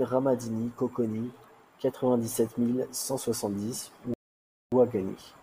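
At 4.14 s the speech halts in a rebuffering stall: playback drains the downloaded audio faster than new data arrives, so the player pauses until enough has buffered. The result is a gap of dead silence running to 4.72 s, adding about 0.58 s to the timeline. When sound returns it picks up at the exact point where it stopped, with nothing skipped or repeated, so the only audible effect is the inserted pause.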